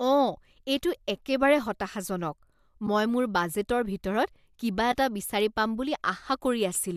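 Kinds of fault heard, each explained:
AAC frame loss with muting: single 10 ms frames dip briefly at 0.97, 2.87 and 4.92 s, faded out and back in by overlapping windows. Unlike a hard dropout, each hole is soft-edged; frames this short likely mean low-delay AAC.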